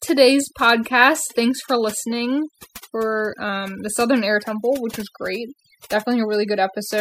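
Overdone noise removal runs throughout: the suppressor cuts bands near its noise estimate, leaving a lowered background with twinkling specks.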